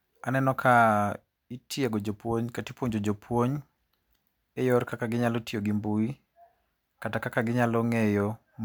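No technical faults can be heard in this speech recording, and the signal holds steady throughout.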